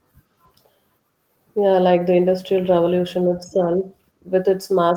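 Speech, with lost packet rebuilt from error correction between 3.59 and 3.69 s, where three packets were lost. There is no dropout, but roughly 60 ms of audio turns rougher and noisier. That fits a few lost packets replaced by the low-bitrate backup copies carried in the following packets.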